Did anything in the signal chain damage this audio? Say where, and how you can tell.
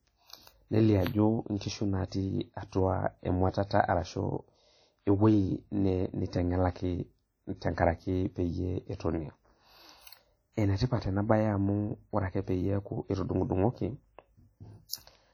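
Yes. At the codec stage, the speech carries heavy, ringing, washy artefacts throughout, with hiss that breathes along with the voice and weak detail dropping out. This is likely WMA compression, with transform blocks quantised coarsely at a low bitrate, around 32 kbps.

There is also pre-echo, from the same codec stage, between 14.89 and 14.93 s. A short hiss of about 47 ms precedes a sharp onset, which sounds softened. The quantisation noise sized for the loud attack was spread across its whole block, filling the quiet gap before it.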